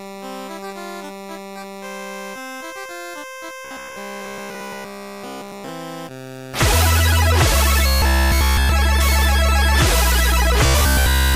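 Robotic sound from repeated short buffers at 3.65–5.69 s, 7.87–8.69 s and 10.66–11.35 s: a rigid 66.7 Hz buzz replaces essentially all the audio, likely from one 15 ms buffer being replayed while the actual audio is skipped.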